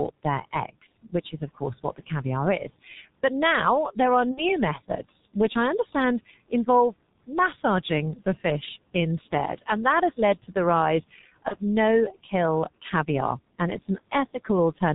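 Speech with faint room noise about 24 dB below it, heavily coloured throughout by the G.723.1 codec. Nothing above 4 kHz survives, and the coarse 30 ms frames leave the voice muffled and hoarse with smeared consonants, which fits a rate near 6.3 kbit/s. VoIP packet loss concealed by the speech codec occurs at 4.31–4.57 s and 11.48–11.57 s. At each point the decoder stretches its last pitch and filter into a fading buzzy tone or coloured noise across gaps of 60 ms and 30 ms, matching two lost frames and then one. The speech stays weak for a short while after each gap.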